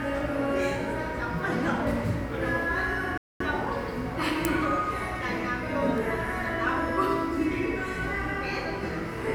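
At 3.18 s a likely Bluetooth stall occurs: delayed wireless packets let the playback buffer empty, so the audio drops to silence for about 0.23 s before resuming at 3.40 s.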